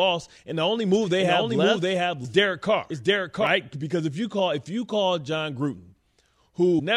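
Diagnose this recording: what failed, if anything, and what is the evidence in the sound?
A doubled audio track runs from 0.94 to 3.47 s: a second full-band copy of the speech trails roughly 0.7 s behind at about the same level, starting and stopping abruptly. It has no decay or room colour, which rules out a reflection. The likely cause is a second, slower capture path or a misaligned edit at the recording or editing stage.

Damaged data in the compressed stream shows up at 2.24 s and again from 6.75 to 6.80 s as brief glitches. The decoder misreads corrupted frames, loses sync and hunts for the next header. These are codec-stage glitches, unlike analogue crackle, which has no jump.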